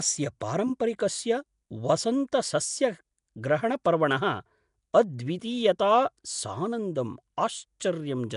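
From start to finish the speech carries a rough, hissy halo and a smeared, underwater quality, plainly audible throughout, and likely the work of Nellymoser compression. The coder spends too few bits per block, so weak bands are dropped and refilled with noise, which fits a rate near 44 kbps. On a spectrogram, the harmonics look blurred and speckled with noisy patches, and nothing appears above about 10.6 kHz.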